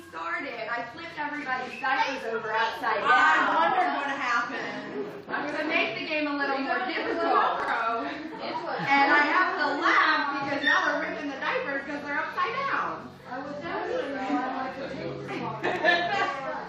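Chunks out of order at 3.48–3.56 s, 7.60–7.68 s and 15.64–15.76 s jumble the audio briefly. In each, a segment that fits a 40 ms chunk plays one chunk late, or two late at 15.64 s. Nothing goes missing, but the misplaced pieces leave hard joins.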